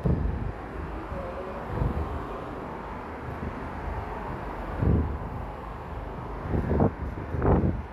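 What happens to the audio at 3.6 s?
At 3.6 s the channel delay (doubling) is at work, as it is for the whole clip: one channel runs about 40 ms behind the other, and when the two are folded down to mono the late copy is added at the same level. A 40 ms gap is too long to blend, so every onset is heard twice, a short slap echo trailing each attack and thickening the sound into a doubled texture.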